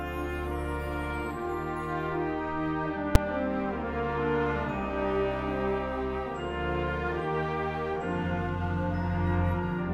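At 3.15 s, invalid numbers at full scale: a calculation produced invalid values that were pinned to full scale for about 5.33 ms, which fits a 256-sample block, heard as one sharp bang.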